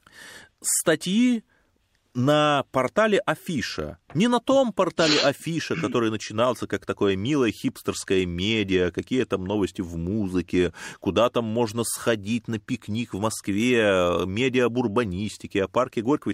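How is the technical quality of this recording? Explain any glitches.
No glitches or technical faults are audible anywhere in the recording.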